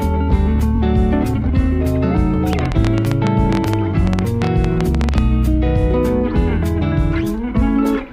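At 0.75 s there's a brief stutter from repeated frames: one 21.3 ms block plays twice more, adding 42.7 ms. From 2.53 to 5.19 s comes a train of clicks, about thirty irregular pops at around 11 per second, well above the sound, likely from electrical interference.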